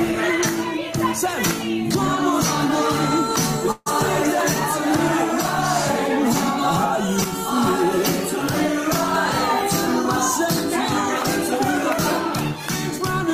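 At 3.71 s the sound stalls for about 0.17 s, until 3.88 s. For roughly 146 ms the last sound is drawn out as a fading buzz or hiss, followed by about 10 ms of silence before the audio resumes exactly where it left off, now 146 ms later than before. This is a call audio freeze, likely caused by packets held up in transit so that the jitter buffer ran dry. Nothing is lost; a gap is inserted instead.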